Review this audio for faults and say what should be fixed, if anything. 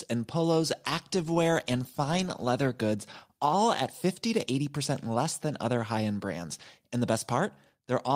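No faults turn up in this speech recording, so nothing needs to be fixed.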